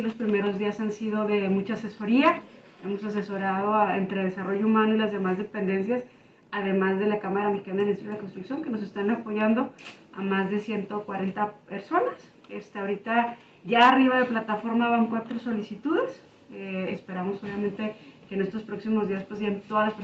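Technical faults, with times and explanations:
No technical faults detected.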